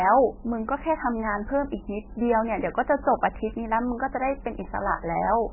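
From start to finish, the speech is band-limited and smeared. Nothing reaches above 3 kHz, so sibilants lose their edge and the sound turns dull. The texture is watery and swirly. Weak frequency components flicker in and out from one frame to the next. Consonant onsets blur. The likely cause is heavy MP3 compression. An encoder starved of bits has cut the treble at a fixed point and dropped quiet detail. The damage fits a bitrate near 10 kbps.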